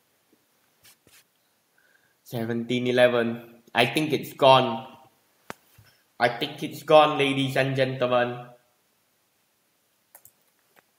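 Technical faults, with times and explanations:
Nothing stood out on listening; no technical fault could be heard at any point in the audio.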